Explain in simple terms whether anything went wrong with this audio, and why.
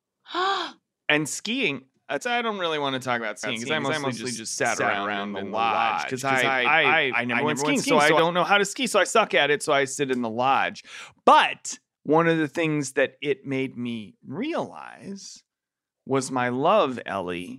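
From 3.43 to 8.19 seconds the speech plays twice: a doubled audio track, with a second, equally loud copy trailing about a fifth of a second behind. It is likely a second recording path or misaligned edit. Unlike an echo, the copy never fades, carries no room sound, and switches on and off abruptly.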